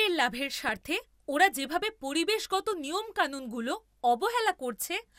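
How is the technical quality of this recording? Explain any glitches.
There's one real glitch, a short burst of DAB burbling from about 0.59 to 0.82 s, just before "ওরা যেভাবে পরিবেশগত নিয়মকানুনগুলো". For that fifth of a second the speech picks up a burbling. It sounds like weak reception let bit errors slip past the error correction into the MP2 data, roughly 0.15 percent, and that fits around nine damaged frames in a row. Corrupted samples put short blips of noise in single sub-bands and corrupted scale factors make sub-bands jump in level for up to a frame, and that produces the burbling.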